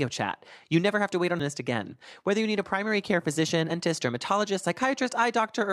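Damaged data in a compressed stream at 1.40 s and 3.69 to 3.71 s: corrupted frames throw the decoder out of sync, producing brief glitches in the speech.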